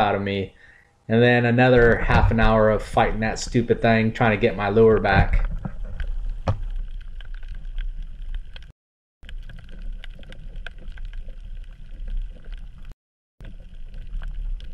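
Two clean dropouts break up the audio: at 8.71 s it cuts to silence for about 0.53 s, and again at 12.92 s for about 0.49 s. That pattern is likely a Bluetooth stall, where interference held up packets, the headphones' buffer emptied, and playback simply froze until the resent data arrived, so you get dead air rather than clicks or garbled sound.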